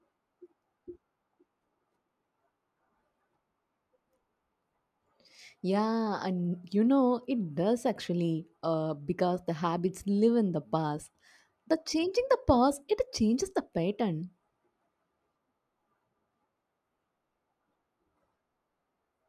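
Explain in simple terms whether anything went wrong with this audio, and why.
Nothing went wrong; I hear no technical faults here.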